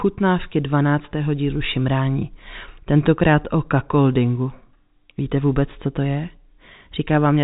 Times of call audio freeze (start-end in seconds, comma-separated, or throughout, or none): none